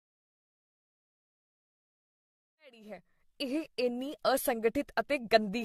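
Throughout the speech, the sound is swirly, smeared and hollow, and consonant attacks blur. Nothing remains above 14.1 kHz. This is likely generation loss. Around seven AAC-style encode passes stack their noise, consistent with a 64 kbit/s chain. The gentle fade-in near 3.7 s carries the same texture.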